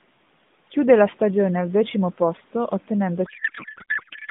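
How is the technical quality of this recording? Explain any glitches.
The recording suffers a codec payload misread in its final second, from 3.26 s to the end. Before that, the speech is confined to the narrowband telephone range of roughly 150 Hz to 3.6 kHz, with only light coding damage, consistent with the AMR narrowband mobile codec at around its 12.2 kbps mode.

At 3.26 s, the receiver starts unpacking AMR frames sent in octet-aligned form as if they were bandwidth-efficient, so every bit field is read from the wrong position. The decoder still sees plausible frames, but it rebuilds them from scrambled parameters. The speech gives way to garbled noise and synthetic warble that barely tracks it, and this continues until the clip ends.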